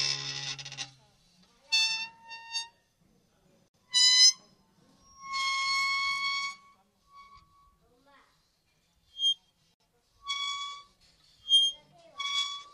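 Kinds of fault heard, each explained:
Gap at a join of encoded pieces: untrimmed encoder padding leaves 58 and 60 ms silences at 3.68 and 9.74 s, six seconds apart, seen as blank spectrogram strips with softened edges.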